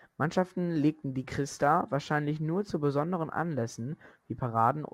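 Sample clock jitter is present from start to finish. The converter's clock wanders by roughly a couple of microseconds, so each sample lands slightly off its proper instant, and the resulting amplitude error tracks how steeply the waveform is changing. In this speech, that produces a faint grainy hiss, around 40 dB below the signal, that thickens on loud passages and sibilant, high-frequency sounds and drops away entirely in the pauses.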